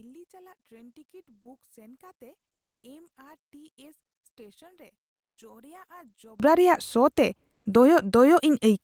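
One channel inverted, from 0.0 to 6.4 s of this speech clip: heard in mono, the centred speech almost disappears, falling by about 30 dB, and only a faint residue of what differs between left and right remains. The likely cause is reversed polarity on one stereo channel, so the material common to both sides cancels when they are summed. The level returns once the two channels stop opposing each other after 6.4 s.

Comfort noise in place of the background, from 5.09 to 5.37 s: for 280 ms the real background, already very low at about 72 dB below the loudest speech, gives way to a smooth, featureless hiss about 32 dB quieter still. This points to Opus discontinuous transmission, likely the sender going silent when its voice detector found no speech and the receiver substituting synthetic noise until sound resumed.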